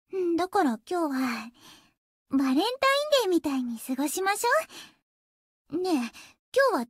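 No technical faults can be heard anywhere here.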